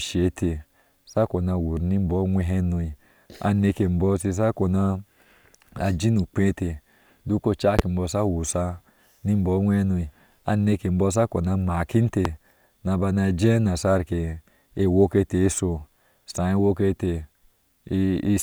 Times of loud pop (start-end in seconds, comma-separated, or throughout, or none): 7.79-7.81, 12.25-12.28